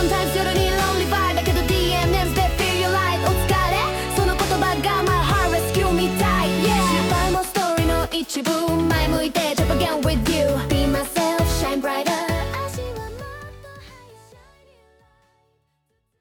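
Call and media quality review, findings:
No faults found; the level tapers off in a smooth fade out beginning around 12 s and ending at 16.2 s, with no click or hard edge at the close.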